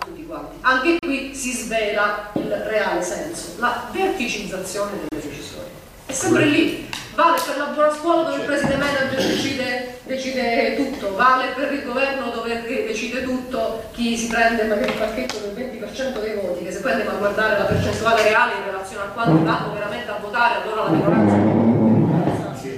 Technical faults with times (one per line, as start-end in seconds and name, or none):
0.99-1.03 Bluetooth stall
5.09-5.12 Bluetooth stall